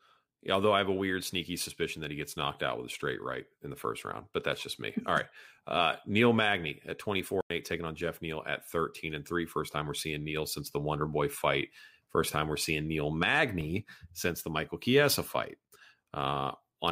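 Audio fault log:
7.41–7.50 s, corrupt frame muted: The speech just drops out for about 94 ms, cutting in abruptly rather than fading. Damaged bits in the compressed stream made the decoder reject those frames, and the player filled the gap with plain silence. The hole's length fits roughly three codec frames going missing together. Timing carries on unchanged, so the audio picks up right where it would have been, with nothing lost to drift afterwards.
13.61 s, corrupt FLAC frame: A brief click-like burst of noise, only about 6 ms long and peaking at about -28 dBFS, so it's a fairly soft tick rather than a full-scale blast. Flipped bits got past without a checksum check, so the FLAC predictor started rebuilding samples from wrong values and produced garbage until the damaged stretch ended. The next intact frame decodes cleanly, which is why the disturbance stops so sharply.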